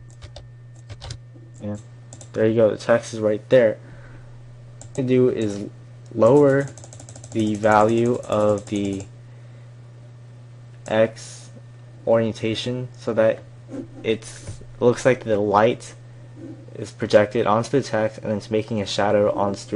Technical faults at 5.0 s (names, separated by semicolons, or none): damaged data in a compressed stream